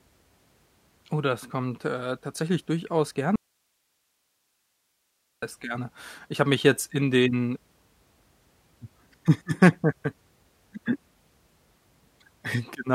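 At 3.36 s the speech drops out abruptly and doesn't return until 5.42 s, so roughly 2.07 s goes missing mid-flow. It's an audio dropout to a faint residue: instead of true silence, the gap holds only hiss sitting something like 50 dB below the speech. That suggests the wanted signal was likely lost upstream while everything after the break stayed live. The hard edges at both ends make it sound nothing like a natural pause or a fade.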